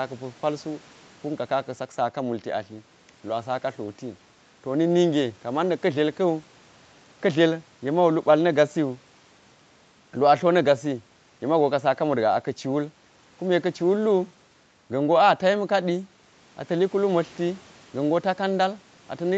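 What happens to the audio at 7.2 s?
Nothing goes wrong at 7.2 s; the speech runs through intact there, carried by the ordinary call processing and codec path.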